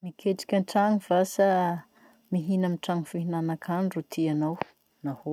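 No technical faults are audible.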